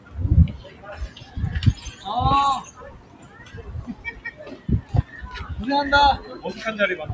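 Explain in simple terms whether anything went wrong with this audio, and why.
A noise suppressor designed for speech was left running on these sounds. It treats steady tones and lingering tails as background noise and keeps turning them down, so the level pumps and sags throughout while sharp attacks still get through.

Sound cut by the noise suppressor is clearest at 0.0–0.15, 0.58–0.85, 1.08–1.37, 2.7–3.61, 3.95–4.41 and 4.57–5.13 seconds. In each of these stretches the suppressor mistook part of the sound for noise and pushed it down noticeably, so it dips or fades early.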